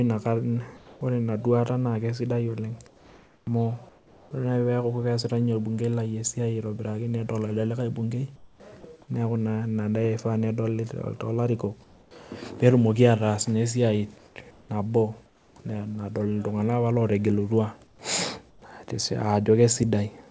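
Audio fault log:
0.77–1.01, 2.87–4.31, 8.36–8.60, 11.84–12.11, 14.18–14.69, 15.26–15.56, 17.87–17.99 and 18.50–18.62 s: comfort noise in place of the background. In each speech pause the real room sound gives way to a smooth, featureless hiss, about 3 to 8 dB quieter where measurable. This is likely discontinuous transmission, with the receiver synthesising noise until speech resumes. Both real and filled background, like the speech, stop at 8 kHz.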